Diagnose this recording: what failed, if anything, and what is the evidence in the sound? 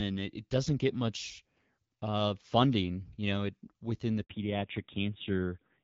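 A handover gap at the network stage: right after "know it within the", the speech drops out for 60 ms, from 4.23 to 4.29 s, as the call switches links and no frames arrive. The waveform shows a flat stretch; the spectrogram shows a clean vertical blank column.

A fallback to narrowband follows at the codec stage. From 4.29 s to the end, everything above 4 kHz disappears, and the wideband detail heard earlier at a moderate HD Voice rate gives way to a duller, rougher sound that fits AMR-NB around 7.4 kbit/s. On the spectrogram the energy is cut off sharply at 4 kHz.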